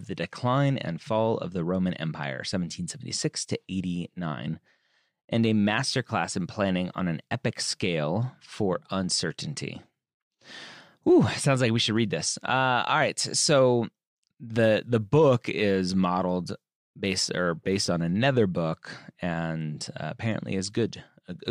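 Nothing in this speech recording trips up the ear at any point, so there's simply no technical fault to walk through here.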